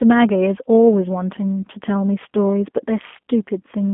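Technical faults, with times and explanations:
Throughout, G.729 codec: the speech is held inside a narrow telephone band of roughly 200 Hz to 3.5 kHz, with nothing at all above 3.5 kHz, and carries a plainly audible rough, slightly synthetic edge, which fits G.729A at 8 kbit/s. The codec rebuilds each 10 ms frame from a vocal tract filter, a pitch predictor and a handful of coded pulses, so natural detail is replaced by an approximation that sounds buzzy and thin.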